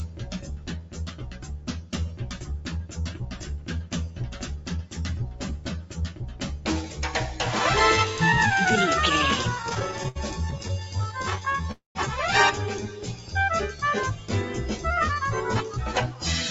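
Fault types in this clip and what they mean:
Noise suppressor applied to music or sounds: A suppressor built for speech stays active throughout and treats steady tones, ambience and decays as noise. Level swings by around 10 dB. On the waveform, onsets stay tall while sustained parts sag. On the spectrogram, held partials and tails fade unnaturally.
Sound cut by the noise suppressor: Individual passages sink by up to about 8 dB. The longest runs from 0.07 to 1.93 s, and there are shorter dips near 3.4, 4.6, 5.6, 13.1 and 14.1 s. The waveform envelope narrows over sustained stretches, and the spectrogram shows darker bands and clipped decays while sharp attacks survive.
Repeated stalls (stutter): Between 9.55 and 11.66 s, playback halts 30 times. Each time the receiver stretches the last sound, about 374 ms in total, with gaps of up to 71 ms and nothing lost. The waveform shows repeated smeared segments, and the spectrogram shows recurring blurred vertical stripes as the rhythm drags.
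Call audio freeze: From 11.72 to 11.97 s, the sound becomes a fading continuation of itself, then about 130 ms of silence, and resumes where it stopped. The likely cause is delayed packets emptying the jitter buffer. The waveform shows a tapering blob then a flat line, and the spectrogram a blurred column then blank space.
Jitter buffer speed-up: From 14.94 to 16.15 s, the receiver removes tiny pitch-period slices, roughly 70 ms in all. The audio runs at 105% speed with unchanged pitch and sounds slightly hurried. Spectrogram harmonics stay at the same frequencies, but events crowd closer together, and waveform timing looks slightly compressed.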